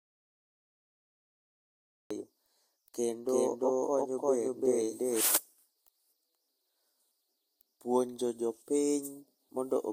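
A speech clip that opens in an audio dropout to silence. The dropout is already under way when the clip begins and lasts until 2.1 s. Those first seconds are silent, with no room tone or hiss beneath them. The speech then arrives abruptly, mid-flow. Whatever was said before 2.1 s is lost. The likely cause is an input that was lost, through a disconnected device, a failed link or a mute, while the recorder kept writing silence. From 3.29 s to 5.21 s there is a doubled audio track. A second full-band copy of the speech runs roughly 300 ms behind the first, at much the same level. It is a clean repeat with no decay or room colour, so it sounds like two overlapping takes rather than an echo. It switches on and off sharply at both ends. This is likely a second capture path with extra delay, or an edit that left two copies out of step.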